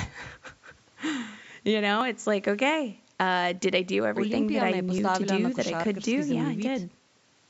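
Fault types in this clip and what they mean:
Audio missing between chunks: The speech skips twice, at 2.01 s and 4.98 s. Each time a sliver of sound, a few tens of milliseconds, vanishes. The audio on either side is butted together with no silence between. The two gaps fall about 3 s apart. That spacing points to a recorder or processor working in 3 s blocks. It likely drops a short piece each time one block closes and the next one opens.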